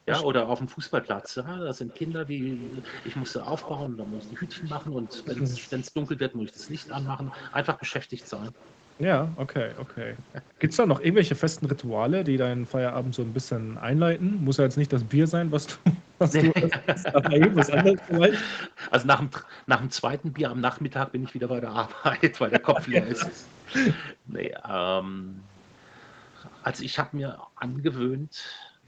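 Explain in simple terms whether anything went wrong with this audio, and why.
Speech suppressed in double talk occurs at 0.00–0.48 s, 10.51–10.60 s, 16.52–18.69 s and 22.51–27.47 s. The voice dips sharply or breaks into pieces, more mildly in the short 10.5 s case. The likely cause is both sides talking at once, so the echo canceller turned the talker down along with the echo.

Background gated by the echo canceller appears at 0.76–0.88 s, 6.29–8.17 s, 19.31–20.84 s, and from 24.28 s to the end. The room sound drops away almost to silence, sometimes in brief gaps, then returns. The canceller clamped the microphone while the far side's loudspeaker was playing.

Echo leak runs from 1.07 to 8.69 s and from 16.68 to 26.63 s. A faint delayed copy of the voice trails the original by about 0.15 s. The likely cause is a loudspeaker at one end whose echo canceller failed to remove everything its microphone picked up, so the leftover was sent back.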